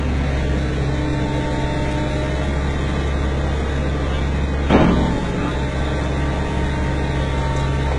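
From start to finish the sound carries heavy HE-AAC compression damage, likely from an encode at a very low bitrate, which fits something around 12 kbps. Only the lower spectrum is truly coded; the treble is rebuilt by copying lower bands upward, so its harmonics fail to line up across the crossover and bright detail turns gritty and metallic. On a spectrogram the upper band looks smeared and repeated, with nothing above 11 kHz.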